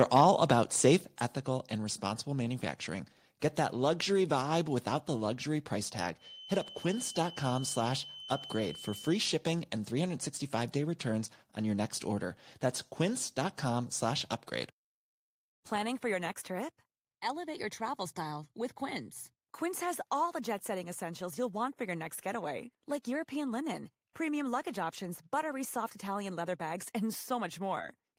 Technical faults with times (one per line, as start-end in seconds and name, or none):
1.20 microphone volume stepped down